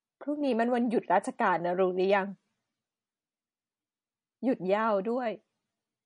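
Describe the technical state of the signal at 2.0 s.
At 2.0 s the speech carries plainly audible codec damage, likely MP3 compression, present throughout the clip. The treble stops sharply at 10.6 kHz, and weak frequency lines flicker on and off between frames, giving a watery swirl that points to a starved bitrate near 40 kbps. A simple low-pass filter would cut the treble without this swirl.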